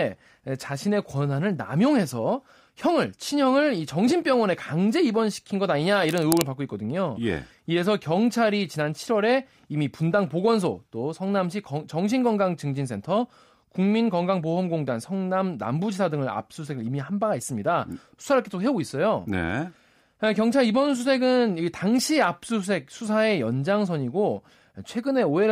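A worn cable, connector or control being moved likely caused the cable scratch noise from 6.09 to 6.42 s, where rapidly shifting contact resistance adds dense, uneven noise bursts. The speech gets a brief scratchy rustle on top, roughly 10 dB below it.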